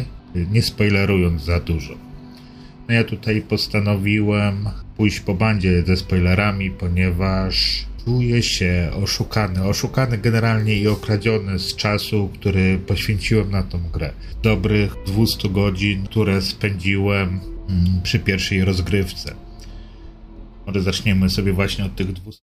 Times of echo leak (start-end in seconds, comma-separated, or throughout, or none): none